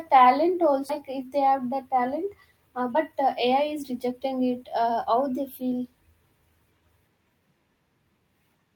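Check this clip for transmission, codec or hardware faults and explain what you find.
Two transmission faults stand out.

At about 0.89 s there's a skip ahead: roughly a second of speech got dropped while later audio was already queued, so playback jumps straight across with no gap.

From 2.73 to 5.10 s, just before "they feel", there's a jitter buffer speed-up: the receiver trimmed tiny pitch-period chunks, about 200 ms in total, so the speech runs about 9% faster and sounds hurried, though the pitch stays put.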